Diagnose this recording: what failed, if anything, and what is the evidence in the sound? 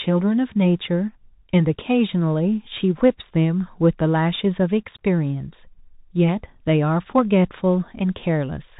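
Bluetooth CVSD headset codec, throughout the speech, at the codec stage. Nothing above 4 kHz survives, s sounds turn scratchy, loud high sounds distort, and granular hiss sits underneath. That fits a 64 kbps one-bit stream whose adaptive step cannot track fast waveform changes.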